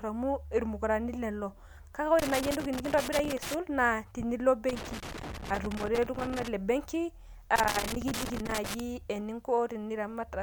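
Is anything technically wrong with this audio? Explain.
Yes. The speech has loose connector crackle in three bursts: 2.19 to 3.54 s, 4.69 to 6.48 s and 7.56 to 8.80 s. A worn or dirty contact is making and breaking as it shifts, chopping the signal on and off, heard as ragged scratching over the speech. Unlike evenly spaced digital clicks from buffer underruns, this crackle is irregular and clustered, arriving in uneven bursts each lasting over a second.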